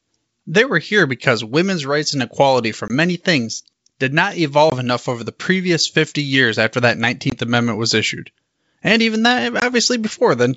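Packet loss on an ADPCM call drops a single 20 ms packet at 2.88, 4.70, 7.30 and 9.60 s. The decoder's predictor desyncs, so each hard gap in the speech is followed by briefly distorted speech.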